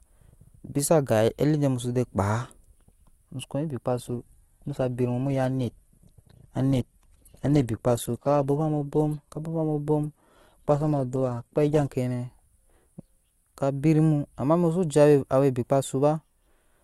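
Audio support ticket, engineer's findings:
Speech dulls abruptly after "muso wei ony" at 3.9 s. Treble gone above about 12.4 kHz, codec artefacts, no gap, until 11.9 s, then full quality returns. Adaptive stream at a lower bitrate: player dropped to a low-bitrate rendition for 8 s, consistent with a slowed connection. Sound points to Opus falling from roughly 64 to 12 kbit/s.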